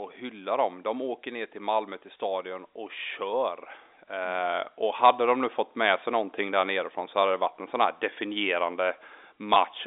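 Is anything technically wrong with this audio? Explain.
Yes. Near the very end, from 9.54 to 9.56 s, there is packet loss with pitch repetition. About 20 ms of audio went missing, which fits a single lost packet. The receiver filled the gap by repeating the last pitch period of the speech. That loop briefly holds the sound in place. It comes across as a slightly held, buzzy tone before the speech resumes. The narrow telephone band, roughly 300 Hz to 3.7 kHz, stays audible throughout.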